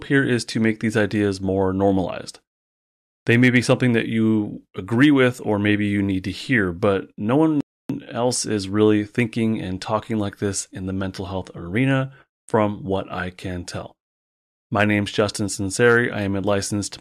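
At 7.61 s, just after "to hear but no", the speech cuts to silence for about 290 ms before resuming with "else is really thinking". This playback stall likely comes from the player running out of data.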